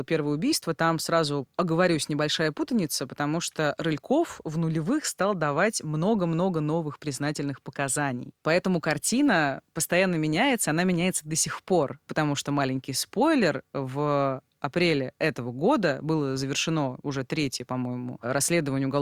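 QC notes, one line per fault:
Nothing to flag here, the speech comes through without any technical faults worth noting.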